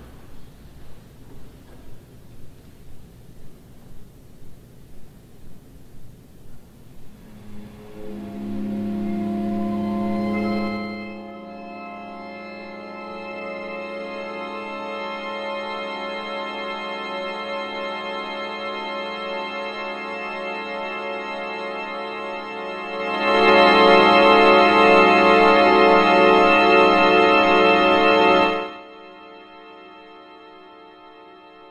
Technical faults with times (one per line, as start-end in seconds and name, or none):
10.54-11.33 zipper noise
22.89-23.50 zipper noise
28.42-28.84 zipper noise